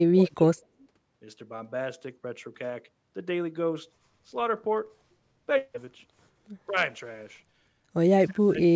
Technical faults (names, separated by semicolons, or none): speech suppressed in double talk